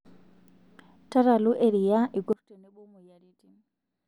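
From 2.33 s to the end, the speech drops by about 27 dB when heard in mono. This is likely one channel inverted. Reversed polarity on one side cancels what both channels share. The centred voice nearly vanishes, leaving a faint residue.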